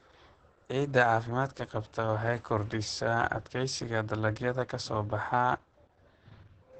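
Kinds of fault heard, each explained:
Opus voice compression: heavy low-bitrate speech coding throughout, pointing to roughly 10 kbps in the SILK linear-prediction mode, wideband. The voice sounds muffled, hoarse and slightly robotic from coarse excitation coding. A spectrogram shows nothing above about 8.7 kHz and smeared, blocky harmonics.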